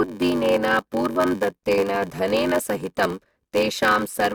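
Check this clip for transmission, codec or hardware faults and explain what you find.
One fault is present, running through the whole recording: a block size mismatch (padded). A steady buzz near 93.8 Hz sits under the speech, which drags at 0.861 times normal speed with its timbre intact. One stage delivers shorter blocks than the next reads, and the zero-filled remainder leaves a brief gap in every block. The buzz rate fits a 512-sample read buffer.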